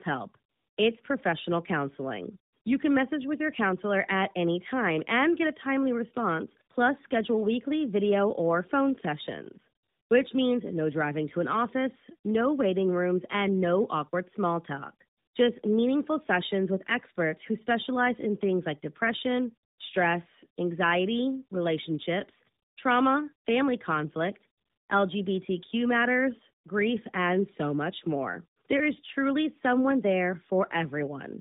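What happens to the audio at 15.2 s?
At 15.2 s the speech carries tandem speech coding, present throughout the clip rather than at that moment alone. The call was coded twice with AMR-NB at 12.2 kbit/s, passing through G.711 A-law in between, so the second coder re-encodes the first one's errors. The result sounds rough, muffled and warbly, with nothing above 3.8 kHz.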